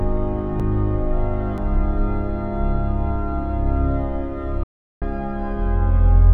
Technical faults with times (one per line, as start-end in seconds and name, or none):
0.60 dropped buffer (overrun)
1.58 dropped buffer (overrun)
4.63-5.02 audio dropout to silence